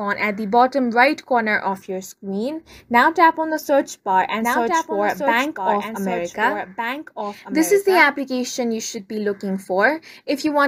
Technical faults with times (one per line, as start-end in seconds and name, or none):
4.40-8.10 doubled audio track